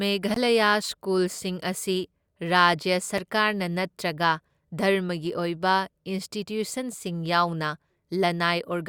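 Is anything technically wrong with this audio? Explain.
Yes: blocks of digital silence, where the program failed to fill the output buffer in time and zeros were played instead. The speech drops abruptly to silence with no fade, once for about 20 ms from 0.34 to 0.36 s, heard as a short hole, and again at 3.18 s for about 5 ms, consistent with a 256-sample buffer, heard as a tick.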